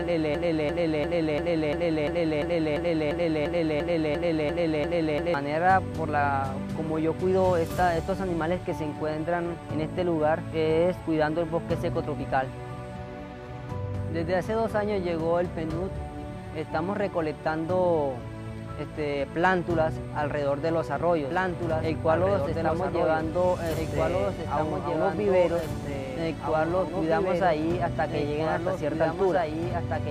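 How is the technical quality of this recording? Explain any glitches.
The recording has two clear faults, one at each end, and both disrupt how the audio plays.

From the very start until 5.34 s there is a broken-record loop. It is already running when the clip begins: a 0.35 s fragment repeats exactly, back to back, 14 times, and whatever should have played in those seconds is gone. The likely cause is a player, encoder or stream that stalled and kept sending the last piece it held. Unlike a stutter or an echo, every repeat is identical and full level, with no decay and no forward progress.

From 21.31 s to the end there is a doubled audio track. A second, full-band copy of the same audio runs about two seconds behind the original and sits about 5 dB quieter. It most likely comes from the sound being captured again through a slower path, or from an edit leaving two copies out of step. 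It starts abruptly rather than building up, and it carries no room colour or fading tail. That sets it apart from reverb or a natural echo: you hear one clean, delayed duplicate overlapping the original until the clip ends.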